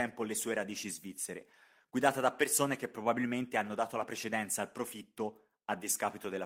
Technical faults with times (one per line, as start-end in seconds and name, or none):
none